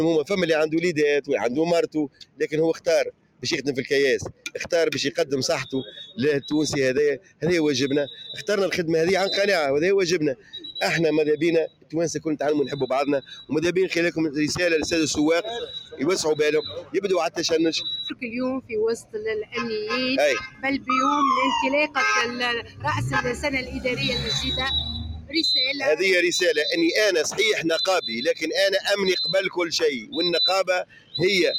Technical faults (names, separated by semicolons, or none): noise suppressor applied to music or sounds; sound cut by the noise suppressor